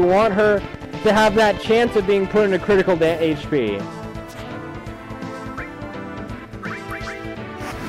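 Likely interference or a faulty connection injects a train of clicks from 0.03 to 1.88 s: about twenty regular pulses, roughly ten per second, ticking sharply above the sound.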